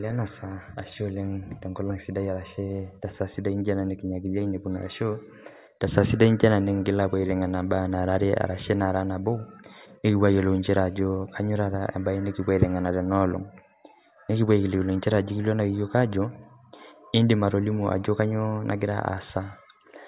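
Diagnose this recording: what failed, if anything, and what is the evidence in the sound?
Nothing seems to have gone wrong anywhere along the chain here, since the speech comes across with no audible fault at any stage from the wiring through to playback.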